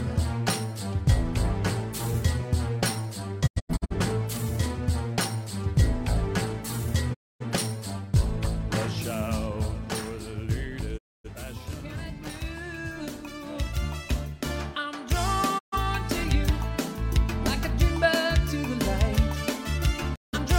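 The receiver repeatedly lost valid frames and muted until good ones returned, a digital broadcast dropout at 3.46–3.95, 7.13–7.44, 10.97–11.29, 15.57–15.78 and 20.14–20.38 s. Each time, the sound fades out over 20 ms into silence. At 3.46 s the silence comes as several short holes, the longest 85 ms.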